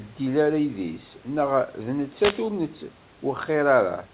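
At 2.10 s there's a wireless microphone noise hit that runs to about 2.49 s, so roughly 0.4 s of trouble. It sounds like a sudden swish of static washing over the speech. What's going on is the FM radio link from the mic fading as reflected signals cancel the direct one, and the receiver's own noise rises up to fill the gap. It all sits inside narrowband call audio with nothing above 4 kHz, which fits a G.711 path.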